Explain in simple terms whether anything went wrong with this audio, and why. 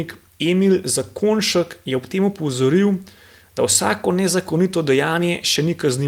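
Nothing went wrong with this recording of speech. Listening through it, no technical fault of any kind turns up at any point.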